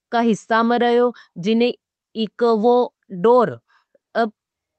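No technical faults can be heard anywhere in this speech clip. It has passed through a WebRTC call path with the Opus codec, and its top end stops at about 8 kHz, as expected for a wideband call setting.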